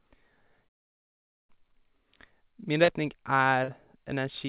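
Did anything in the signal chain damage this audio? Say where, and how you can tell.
Yes, at the network stage: two short concealed packet losses, at 2.84 s and again at 3.64 s, each leaving roughly 40 ms of speech that never reached the decoder in time. The receiver bridged each gap by extending the preceding sound, repeating its pitch where voiced and substituting shaped noise where not, before blending back into real audio. Each shows as a brief smear or wobble within the narrowband call audio, which has no content above 4 kHz, consistent with G.711 mu-law.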